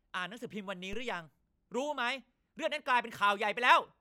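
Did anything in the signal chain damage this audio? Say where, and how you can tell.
Yes: a DC step at the converter input at 0.93 s shifts the zero line by about −34 dBFS, causing a low thump or click as a 2 Hz high-pass drains the offset away.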